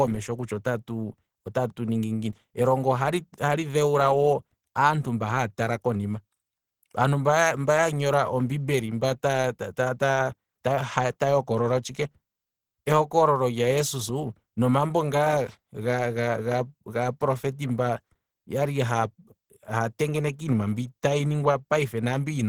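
Throughout the speech, Opus compression, likely running near 16 kbps in its hybrid speech mode, starves the bands of bits, leaving the sound plainly muffled, hoarse and grainy.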